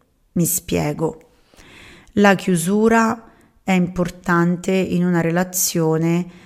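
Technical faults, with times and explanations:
0.83–6.39 s, clock slip clicks: faint, evenly spaced ticks about every 0.7 s, roughly seven in all, riding on the speech and heard most clearly on louder sustained sounds. They likely come from two devices on unsynchronised clocks drifting apart by around 30 ppm, so a single sample is dropped or repeated each time the error reaches one sample. A spectrogram shows thin vertical broadband lines at a steady spacing, and the waveform shows a tiny step or discontinuity at each one.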